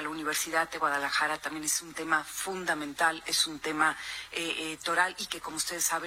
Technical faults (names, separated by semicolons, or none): USB whine